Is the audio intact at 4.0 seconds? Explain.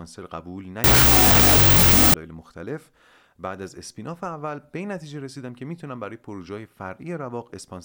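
Yes, the speech at 4.0 seconds is intact, with no dropout, click, distortion or other fault at that moment.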